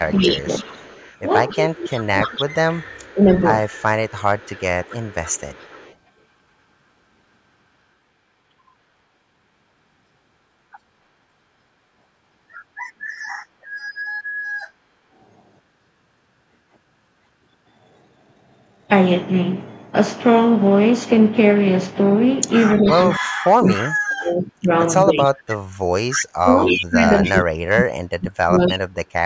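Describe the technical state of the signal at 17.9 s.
At 17.9 s the speech signal is intact, with no dropout, distortion or other fault; only the call's normal microphone processing is audible, with its bass trimmed and nothing above 8 kHz.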